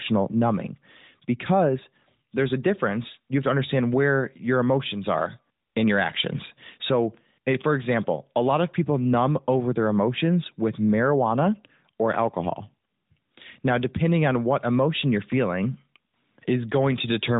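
Nothing technically wrong turns up in this bit of speech, so there's no fault to point to here.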